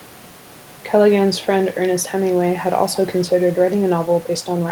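Speech recording with no technical faults to report.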